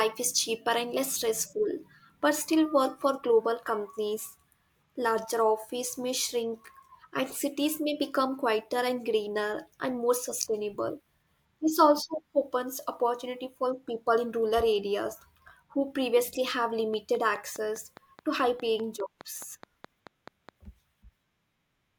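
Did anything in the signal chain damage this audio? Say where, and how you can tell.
Yes. From 16.94 to 20.50 s, just after "areas who previously have", a train of clicks ticks through the speech at a steady 4.8 per second, around twenty near-identical pulses that peak above the speech and persist into pauses. That regularity, unlike random crackle, points likely to interference in the analogue wiring.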